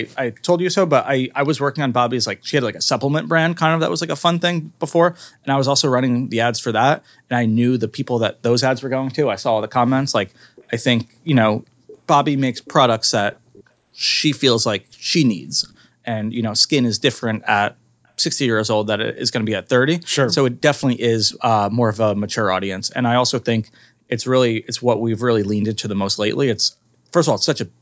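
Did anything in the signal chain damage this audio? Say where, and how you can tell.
Yes. A faint, delayed copy of the voice trails the speech at 10.56–10.65, 11.63–11.99, 12.55–12.73, 13.33–13.64, 15.70–15.78 and 20.31–21.34 s. It lags by about 360 ms and sits about 15 to 40 dB below the speech, loudest in the final stretch. This is likely echo leak in call processing: a loudspeaker's output slipped past the echo canceller and was sent back.

The room background dips sharply, by up to about 40 dB, at 16.58–16.71 s and 26.78–26.92 s. Each dip lasts roughly 0.1 to 0.15 s before the sound returns. This is background gated by the echo canceller, which pulled the microphone down hard while the loudspeaker was playing, then released it.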